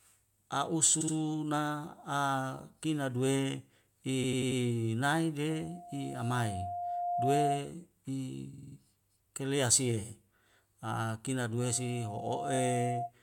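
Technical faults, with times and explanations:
1.00–1.14 s, 4.23–4.60 s, 8.52–8.76 s, 12.54–12.59 s: repeated frames. A short stutter, as blocks of 69.7, 92.9, 46.4 and 23.2 ms replay two, four, five and two extra times. Compressed frames were written or sent again, lengthening the audio by 46 to 372 ms each time.
5.50–7.72 s, 11.60–13.12 s: loudspeaker feedback squeal. A steady 703 Hz tone swells into a squeal, first over about two seconds to roughly 5 dB above the sound, then over about a second to roughly its level. The microphone is picking up its own loudspeaker, and the loop gain exceeds one at that frequency.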